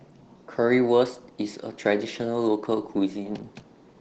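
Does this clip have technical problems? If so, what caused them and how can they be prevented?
Yes. Opus voice compression runs through the whole clip, and the damage is plainly audible: the speech sounds hoarse and slightly robotic. In hybrid mode the codec models the lower band with SILK linear prediction and hands content above 8 kHz to a thin CELT layer. The coarse excitation coding heard here points to a rate around 16 kbps. To prevent this, encode at a higher bitrate or keep a lossless copy for analysis.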